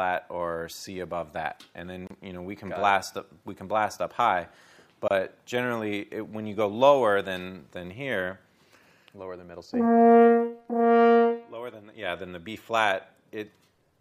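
Separately encoded pieces were joined without trimming each run's start-up delay and end padding, leaving a gap at a join of encoded pieces at 2.07 s (about 32 ms) and 5.08 s (about 27 ms): brief dropouts with smeared edges before the sound resumes where it stopped.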